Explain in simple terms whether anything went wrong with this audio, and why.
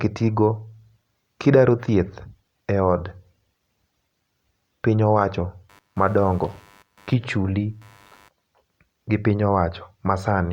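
Computer activity noise: the computer's changing workload disturbed the audio's shared ground, adding a faint buzz from 5.69 to 8.31 s, right after "piny owacho".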